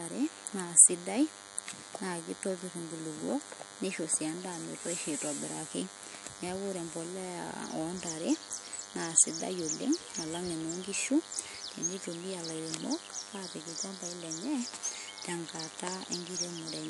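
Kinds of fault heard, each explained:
DECT cordless phone buzz: A nearby DECT handset or base sends a radio burst every 10 ms that the audio circuitry rectifies, giving a thin, steady 100 Hz buzz about 15 dB below the speech throughout. A spectrogram shows evenly spaced lines at 100 Hz multiples; the waveform shows a regular pulse train.
MP3 compression: The speech sounds watery and swirly throughout, with smeared consonant attacks and nothing above 11.3 kHz, likely from a low-bitrate MP3 encode discarding treble and weak components. A spectrogram shows a hard ceiling at 11.3 kHz and flickering holes where components switch on and off.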